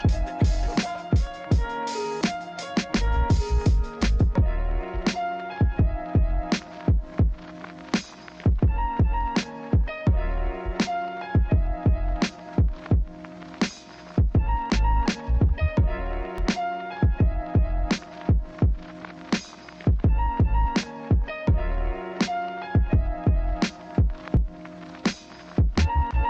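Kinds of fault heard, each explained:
Overlap between stream segments: Where two stretches of audio are joined, their time stamps claim the same few milliseconds, and the player trims that shared span even though the sound was never doubled, so roughly 7 to 12 ms goes missing and the waveform jumps. It is heard as a brief click or tiny skip at 12.39, 16.38 and 24.37 s, all on 4-second segment boundaries. A dropout would leave silence, whereas here sound is simply missing.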